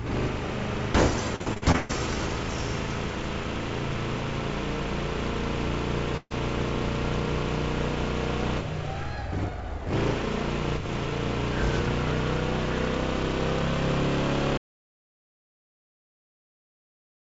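Repeated packet loss (robotic sound) runs from 1.36 to 1.91 s. Six gaps in quick succession each get patched by stretching the preceding sound, so about 300 ms of real audio is replaced and more than half of that span turns choppy and mechanical. The longest hole is 132 ms. A burst of packet loss at 6.17 to 6.32 s removes about 140 ms in one go. The receiver extends the last sound and fades it, and the final 40 ms falls fully silent before the audio picks up further along. An audio dropout to silence starts at 14.58 s and lasts to the end. The sound cuts to silence with no room tone, most likely because the input device or link was lost while recording continued. All of this comes through a call path with nothing above 8 kHz, which fits G.722 at 64 kbps.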